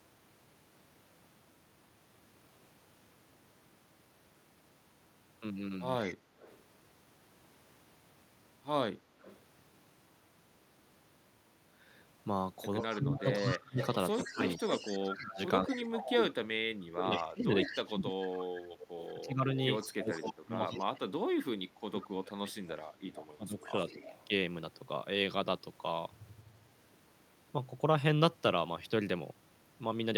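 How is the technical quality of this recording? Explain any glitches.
The recording has clear call-path problems: repeated echo leak and a long stretch of speech suppressed in double talk.

Echo leak appears at 6.03–6.57 s, 9.22–9.39 s, 12.81–20.18 s and 23.15–24.26 s. A copy of the speech returns about 148 ms late, likely because a far-end loudspeaker's echo canceller let residue through. It sits roughly 10 to 25 dB below the speech and is strongest in the long middle passage. On a spectrogram it shows as faint, shifted repeats of each syllable's harmonics.

Speech suppressed in double talk runs from 12.81 to 24.01 s, affecting about seven seconds in total. The canceller, likely confused by simultaneous talk, pulls the voice down in chunks, by around 25 dB at worst. The waveform shows abrupt envelope dips, and the spectrogram shows upper bands thinning or blanking.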